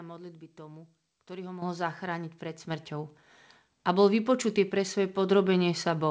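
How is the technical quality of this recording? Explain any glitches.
The level of the speech jumps twice, a microphone volume step-up, heard through a call link whose band stops at 8 kHz, consistent with a wideband codec such as G.722.

At 1.62 s the level rises by about 9 dB, and at 2.7 s by another 5 dB or so. Each time, the call software judged the microphone too quiet and raised the device's input volume in a single increment rather than ramping it. Because the change happens before any processing, voice and background noise step up together, abruptly.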